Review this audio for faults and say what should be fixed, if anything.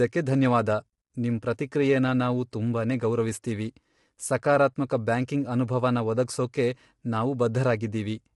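Low-delay AAC compression, throughout the clip: the speech sounds rough and grainy, with noise filling the gaps between the pitch harmonics, and nothing at all above 11.6 kHz. The likely cause is AAC-ELD, the low-delay AAC used for video calls. Its very short frames cannot resolve the harmonics cleanly and spend bits quickly, and the damage here points to a low bitrate of about 32 kbps. To prevent it, record or export the speech at a higher bitrate, or with a standard, longer-frame codec when low delay isn't needed.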